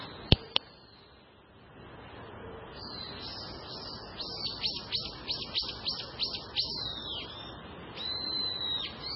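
MP3 compression runs from start to finish: nothing reaches above 5.6 kHz, and the audio has a watery, swirling texture, with sharp attacks smeared and faint detail flickering in and out. The likely cause is an MP3 encoder starved of bits. It cut the treble at a fixed point and discarded weaker frequency components, which drop out and return from frame to frame. Damage this heavy fits a very low rate, around 16 kbps.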